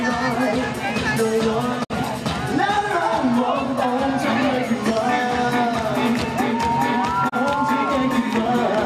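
At 1.83 s the audio fades out over about 20 ms and stays silent until 1.92 s. This is a digital broadcast dropout. The receiver stopped getting good frames and muted rather than play damaged data. The 48 ms of lost audio fits two missing frames. At 7.28 s the same thing happens, shorter, ending at 7.34 s. Only 24 ms is missing there, which points to a single lost frame. Neither gap is filled in afterwards.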